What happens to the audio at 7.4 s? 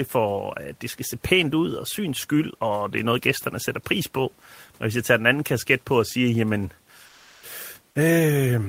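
At 7.4 s the speech has just dropped out: from 7.05 to 7.43 s about 260 ms of real sound is lost under flat comfort noise, with the room noise about 39 dB below speech. The likely cause is the sender's voice detector mistaking quiet speech or a word ending for background and sending nothing.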